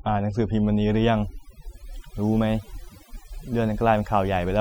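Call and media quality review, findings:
Overdone noise removal, whole clip: background drops and breaks up into twinkling specks. Denoiser set too hard, cutting bands near its noise estimate plus quiet speech detail.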